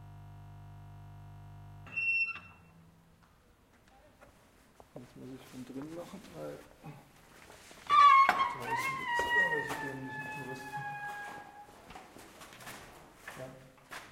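A recording of sounds opens with a system hang loop already under way at 0.0 s and lasting until 1.87 s. One 20 ms slice of audio repeats exactly, roughly ninety times, because the audio hardware kept replaying the same ring buffer while the computer or driver stalled. At 50 repeats per second, this is heard as a steady buzz. A waveform shows identical 20 ms cycles, and a spectrogram shows evenly spaced horizontal harmonics at multiples of 50 Hz.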